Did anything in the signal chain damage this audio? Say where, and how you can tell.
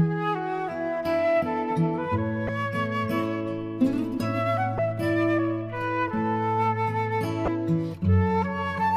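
Yes: damaged data in a compressed stream, heard at 2.46–2.49 s, 4.76–4.79 s and 7.45–7.48 s as brief glitches of about 34 ms each. Corrupted bytes in the encoded data make the decoder misread those frames, lose sync and hunt for the next frame header.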